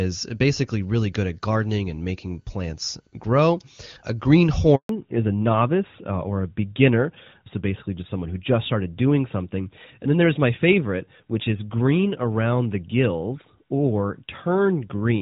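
At 4.75 s a handover gap opens as the call switches networks and no speech frames arrive; the speech drops out for 140 ms, until 4.89 s. From 4.89 s to the end, the call falls back to narrowband: the HD Voice link, which sounded clear at a rate consistent with 23.85 kbit/s AMR-WB, gives way to a codec that fits AMR-NB. Nothing above 4 kHz remains, so the speech turns duller and rougher.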